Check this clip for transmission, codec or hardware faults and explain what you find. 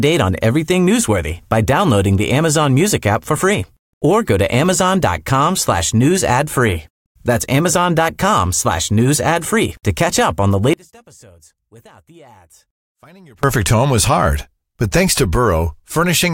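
One fault is present in the speech. From 10.73 s to 13.43 s, between "catch up on the" and "home was hard but", the level falls by about 29 dB to a faint residue. The likely cause is one channel inverted: reversed polarity on one stereo channel cancels the shared centred content when summed to mono, leaving only the small difference between channels.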